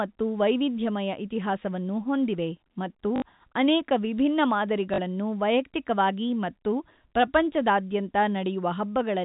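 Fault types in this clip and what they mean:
Packet loss with last packet repeated, at 3.16–3.22 s and 4.94–4.98 s: gaps of 60 ms and 40 ms were filled by replaying the previous block, which fits 20 ms packets, so the stretch stutters with a brief robotic buzz near 50 Hz.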